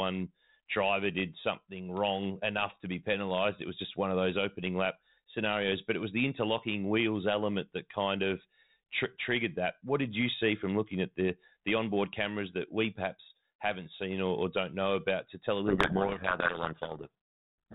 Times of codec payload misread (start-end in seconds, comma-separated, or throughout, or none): 15.66-17.74